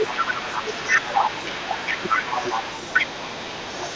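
From the start and throughout, a second, quieter voice sits around 10 dB under the speech: the other side's voice leaking through, likely an echo canceller failing to remove loudspeaker sound. Unlike room reverberation, it is a separate talker, not a smeared copy of this one. From 1.98 to 2.1 s, for roughly a tenth of a second, the speech dips by as much as 20 dB while that other voice overlaps. This is speech suppressed in double talk, likely the canceller turning both voices down. Unlike a network dropout, it coincides with the overlap.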